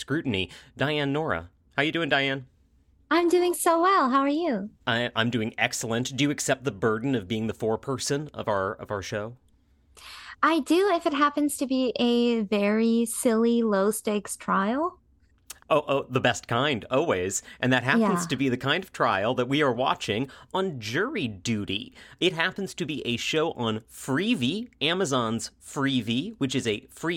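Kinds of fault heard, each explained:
No technical fault can be heard anywhere in the speech recording. There is nothing here to list or explain.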